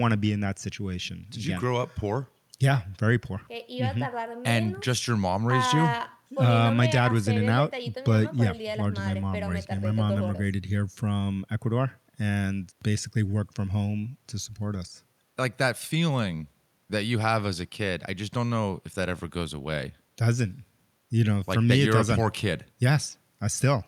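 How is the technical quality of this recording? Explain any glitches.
No audible technical faults anywhere in the speech recording, so there are no glitches to explain.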